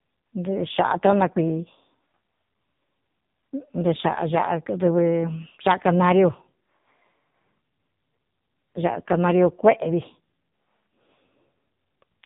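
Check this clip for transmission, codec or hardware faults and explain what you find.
There's one fault, and it runs the whole way through: AMR narrowband mobile codec damage. The speech is squeezed through an 8 kHz vocal-tract model at a very low rate, likely a mode around 5.9 kbps, so it's buzzy and synthetic, with nothing above 3.8 kHz.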